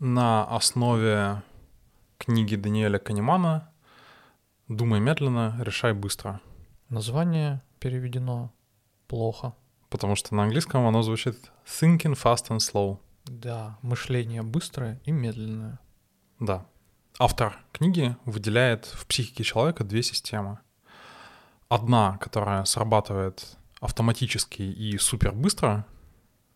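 No technical faults can be heard anywhere in the speech.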